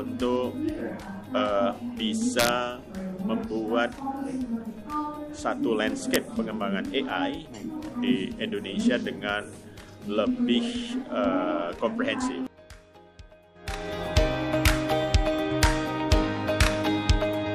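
Violent cracks hit the audio from 2.39 to 2.49 s and briefly at 6.14 s and 14.68 s. This is integer overflow: peaks about 1 to 3 dB past full scale wrapped to the opposite sign instead of clipping.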